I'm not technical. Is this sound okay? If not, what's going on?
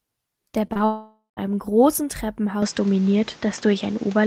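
No, it has three problems.

From 0.67 to 0.81 seconds there is short concealed packet loss. Three tiny pieces of the speech, each about 20 milliseconds, arrived too late at 0.67, 0.73 and 0.77 seconds. The phone covered each gap by stretching the sound just before it. You hear this as a quick smear or wobble. A short sound in a word may go missing.

Next comes what is likely a long network dropout, from 0.85 to 1.39 seconds. About half a second of speech never arrived. The phone kept the last sound going as a fading buzz or hiss. The final part of that stretch is silent. The speech then returns, but the missing half second is gone for good.

At 2.62 seconds the sound changes until the end, most likely because the input switched to a poorer device. It could be a different microphone or a headset in call mode. Nothing above 8 kHz gets through, so the speech sounds duller and more boxed in. 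The loudness shifts a little. A faint new background noise sits under the speech. There is no gap at the switch.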